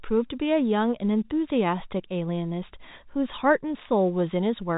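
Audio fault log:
No faults heard anywhere in this speech recording.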